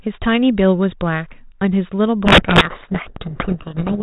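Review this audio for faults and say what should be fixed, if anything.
From 2.25 s to the end, sender and receiver disagree on the bit order of the G.726 code words, a codec payload misread. The decoder takes each misordered code word as a valid difference, so the speech, band-limited and only lightly degraded at 32 kbit/s before this point, becomes buried in harsh distortion. To prevent it, make both ends negotiate and confirm the same G.726 bit packing before audio flows.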